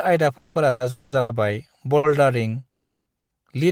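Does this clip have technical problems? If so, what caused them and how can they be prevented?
Yes. Call audio freezes occur at 0.37–0.57, 0.69–0.82, 0.90–1.14, 2.69–3.08 and 3.18–3.31 s. The speech is held as a fading buzz, and the last one drops almost to silence. The likely cause is delayed packets draining the jitter buffer. The speech then resumes where it stopped, with nothing lost. A larger adaptive jitter buffer and a steadier network path would prevent this.

Short stalls from a late packet occur at 1.20–1.31 and 1.97–2.05 s. A sound is stretched for about 90 and 60 ms until the packet arrives. Prioritising voice traffic with QoS would prevent these.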